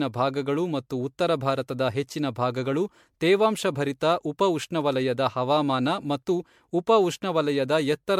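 Speech with generation loss throughout: swirling, hollow, smeared sound and blurred attacks, worse than one MP3 pass at a rate that points to 96 kbit/s would give, though content reaches 20.1 kHz. Likely cause: about seven re-encodes, each on a fresh frame grid compounding noise and spectral holes.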